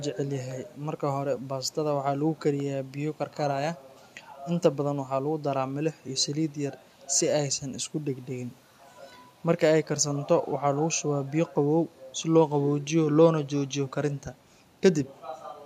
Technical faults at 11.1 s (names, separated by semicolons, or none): none